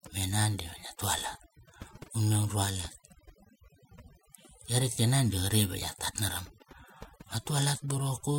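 A speech recording with overdone noise removal running through the whole clip. The noise reduction was set too strong. Frequency bands that come close to its noise estimate are pulled right down or shut off. Quiet parts of the voice fall below that line and are cut too. Between phrases the background drops and breaks up into small twinkling specks.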